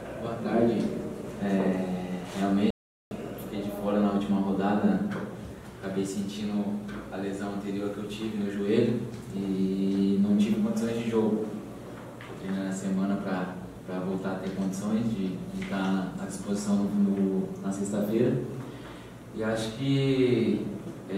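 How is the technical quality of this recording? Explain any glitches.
The recording has one clear glitch, a playback stall from 2.70 to 3.11 s. The player likely ran out of data or was blocked, so the sound drops to silence for 407 ms before resuming.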